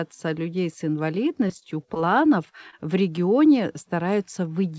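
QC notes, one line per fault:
1.48–1.51 s, short concealed packet loss: about 20 ms of speech never arrived in time, and the receiver bridged the gap with roughly 15 ms synthesised from the preceding sound before crossfading back. The result is a brief smear where a quick consonant can disappear.
1.59–1.63 s, short stall from a late packet: the jitter buffer ran dry, so the last sound was stretched by about 20 ms until the packet arrived. Playback then resumed from the same point, so nothing is lost, but one sound is held slightly too long and carries a slight buzz or dip.
1.94–1.97 s, short concealed packet loss: another 20 ms gap was patched with about 11 ms of extrapolated sound that blends back into the real signal, heard as a quick smear or wobble. The high end stops near 8 kHz, consistent with a G.722 call path.
2.70–2.75 s, short stall from a late packet: a late packet left the buffer empty, and the receiver held the current sound for about 25 ms before continuing. 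No audio is missing, but the drawn-out sound, with a slight buzz or dip, gives a small hitch.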